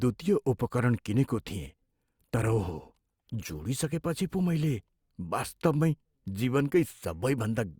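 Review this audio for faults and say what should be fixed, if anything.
From 1.63 to 3.63 s, just after "उपकरण किनेको", the speech abruptly shows more codec artefacts, with no gap. This is an adaptive stream at a lower bitrate, consistent with a drop to roughly 16 kbit/s Opus from about 64 kbit/s while the connection slowed. To prevent it, give the stream enough buffer and a higher minimum bitrate so it does not step down.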